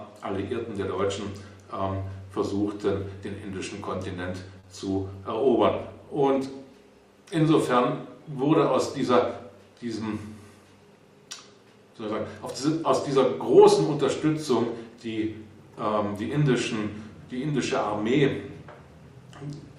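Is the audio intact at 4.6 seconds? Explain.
No. From 4.59 to 4.68 s a sound lingers with a faint buzz or dip: a short stall from a late packet, with the empty jitter buffer bridged by stretching 40 ms.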